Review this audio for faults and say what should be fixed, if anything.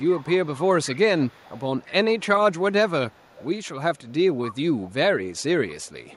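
There's an echo leak: a faint delayed copy of the speech trailing about 218 ms behind, roughly 25 dB under it, at 0.0–2.2 s, 3.1–3.47 s and 3.96–4.94 s, plus a quieter scrap near 35 dB down at 6.11–6.15 s. The likely cause is a far-end loudspeaker whose echo canceller let part of its mic pickup back down the line. Putting that side on a headset, or fixing its echo cancellation, should stop it.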